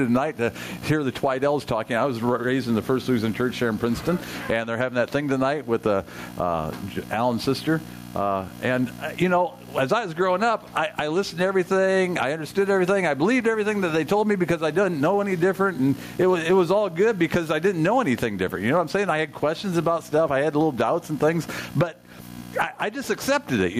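Gain pumping runs through the whole clip, with a level swing of roughly 15 dB. Loud and quiet passages end up squashed close together, so the audio sounds breathy and flattened. That points to input gain set far too hot, with a fast limiter or compressor likely clamping each peak and releasing in the pauses.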